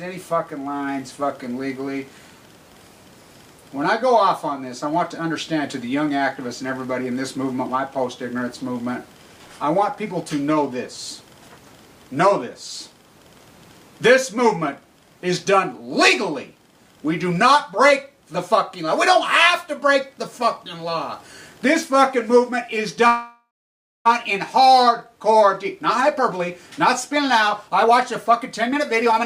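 At 23.07 s the sound stops moving forward for one second, until 24.07 s. The last bit of audio is stretched into a buzzy hiss that fades, and the final 0.58 s or so is silent. This is a call audio freeze, likely from packets held up in transit that left the jitter buffer empty. When the audio resumes, it continues from where it stopped. Almost nothing is lost, but the playback now runs about 0.98 s later than before.

The receiver then works off that backlog with a jitter buffer speed-up. From 25.13 s to 26.40 s the audio plays at 108% speed, and about a tenth of a second is trimmed away. A second, stronger pass runs from 27.13 s to 29.23 s at 111%, removing roughly 0.2 s. Each pass cuts many tiny pitch-period slices. The pitch stays the same, but the sound feels hurried and rushed.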